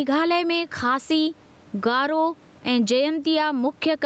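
Right from the start and all the way through, the speech has gain pumping, with a level swing of around 10 dB. The likely cause is input gain set far too high, with a fast limiter or compressor clamping down on every loud syllable. That squashes loud and soft passages toward the same level, so the speech sounds flattened. The top end stops near 8 kHz, which fits a wideband Opus call at about 40 kbps.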